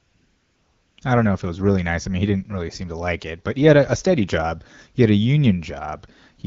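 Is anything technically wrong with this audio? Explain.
Yes. From 0 to 0.97 s, before "I don't know if", there's AMR comfort noise. The phone sent no speech frames, so the receiver synthesised a smooth, steady hiss in place of the real background.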